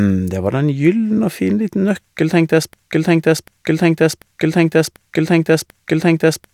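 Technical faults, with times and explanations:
2.73 to 6.54 s, broken-record loop: just after "nøkkel tenkte", a 742 ms fragment of speech begins repeating exactly, back to back, five times, and carries on to the end of the clip without the speech ever resuming. Identical back-to-back repeats point to a player, encoder or stream that stalled and likely kept resending the last piece it held, so whatever should have followed in those final seconds is lost.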